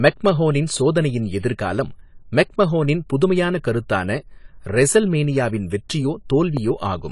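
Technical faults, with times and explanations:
Throughout, AAC compression: nothing is heard above 11.3 kHz and the codec damage is plainly audible, leaving the speech dull and smeared. The likely cause is AAC-LC coding at a low bitrate, around 32 kbps, which lowers the cut-off and quantises the remaining bands coarsely.
6.57 to 6.59 s, loud pop: a single sharp pop sits about 5 dB above the speech, which carries on underneath. A sudden voltage step or pulse entering the signal path, likely from a plug, switch, static or driver glitch, would produce this.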